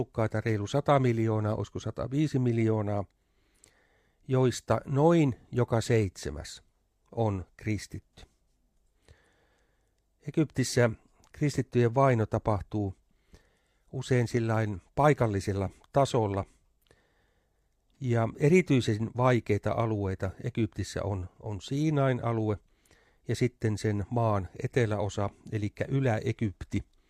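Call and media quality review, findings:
Nothing stood out on listening through this speech recording, so no findings are raised against it.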